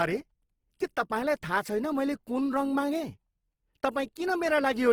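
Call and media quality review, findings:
Speech grainy and rough across the whole clip, plainly audible codec damage, bandwidth still full to about 20.3 kHz. Likely Opus compression in CELT music mode, band energy kept but starved bands filled with folded or noise content, which fits a low rate near 16 kbps.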